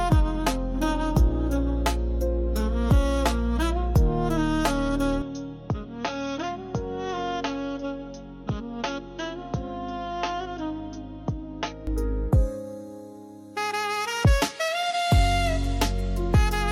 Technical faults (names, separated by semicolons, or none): input switched to a poorer device